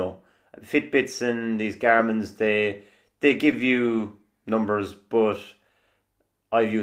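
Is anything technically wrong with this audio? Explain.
Yes. Six 20 ms stretches are lost packets rebuilt from error correction: 3.29–3.31, 3.52–3.54, 3.58–3.60, 3.86–3.88, 3.92–3.94 and 3.98–4.00 s, the last three just before "numbers but". Low-bitrate backup copies filled them, so there are no gaps. Those moments sound briefly rougher and noisier.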